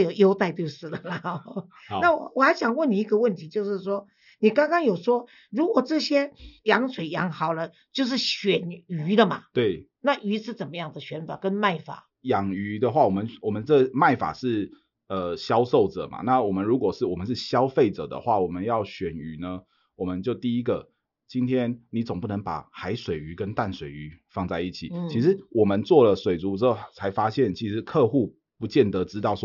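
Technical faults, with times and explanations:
No technical faults are audible anywhere in the speech.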